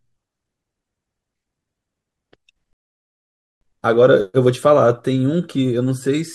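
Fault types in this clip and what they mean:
Rebuffering stall: the player ran out of downloaded audio, so the speech stops at 2.73 s and resumes at 3.61 s exactly where it left off, adding 0.88 s. The waveform shows a flat gap, and the spectrogram a blank vertical band, with no content lost.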